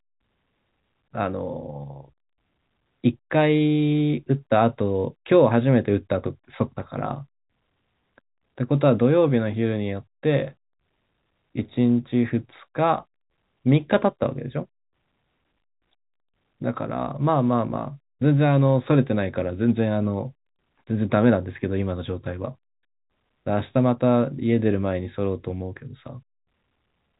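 No technical faults can be heard in this speech.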